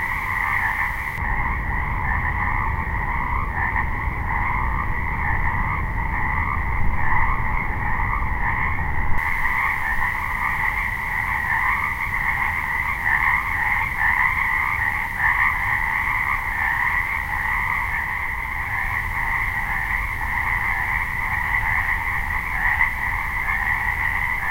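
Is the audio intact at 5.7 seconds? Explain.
No. At 5.7 s you're inside a stretch of wrongly applied de-emphasis running from 1.18 to 9.18 s. A treble-cut filter hit audio that didn't need it, rolling the highs off smoothly to about 11 dB down at 10 kHz, so everything sounds dull and muffled.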